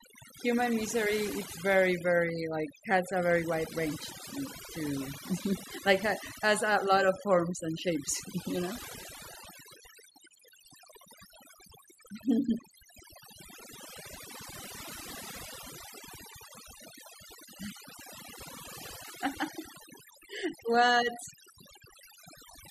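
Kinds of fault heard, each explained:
Overdone noise removal: the noise reduction was pushed way too hard across the whole speech clip, so any frequency band that sat close to what it took for noise got pulled down or shut off entirely, and the softer parts of the voice went along with it. You can hear it in the gaps, which drop to near silence with little twinkling specks.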